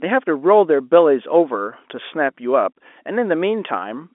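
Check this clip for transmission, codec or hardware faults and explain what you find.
No transmission, codec or hardware faults can be heard.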